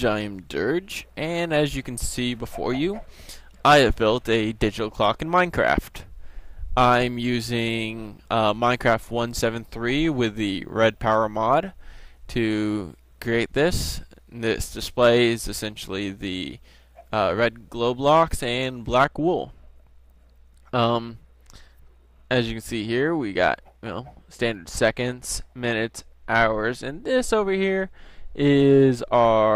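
A de-emphasis stage has been applied wrongly from 19.07 s through to the end of the audio: a treble-cutting filter meant to undo pre-emphasis was run on material that did not need it. The result is a smooth downward tilt in the frequency response, with the top end at 10 kHz sitting about 8 dB lower than at 1 kHz. Over that final stretch the sound turns noticeably dull and muffled, losing its upper detail and air.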